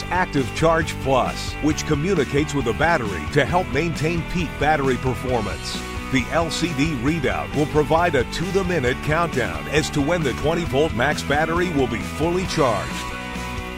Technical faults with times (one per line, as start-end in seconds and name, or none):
none